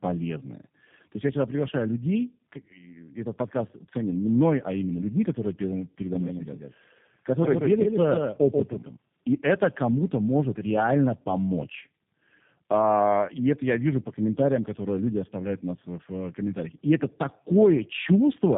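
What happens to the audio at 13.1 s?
At 13.1 s, as throughout, tandem speech coding applies: G.729A re-encodes the already degraded output of AMR-NB and G.711, leaving speech rough, warbly and muffled, with nothing above 3.7 kHz.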